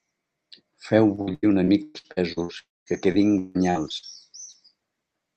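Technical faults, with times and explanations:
1.15 to 4.56 s, repeated packet loss (robotic sound): fifteen short gaps, the longest 165 ms, were each bridged by extending the preceding sound, so about 23% of this span is concealment. The speech turns choppy, with pieces missing between patches.
2.59 to 2.88 s, long network dropout: audio likely stopped arriving for nearly 0.3 s. The last sound is stretched into a fading buzz or hiss, then about 210 ms of silence follows before speech resumes without the lost part.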